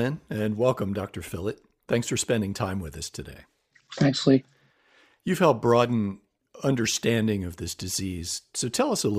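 No faults can be heard anywhere in this speech recording.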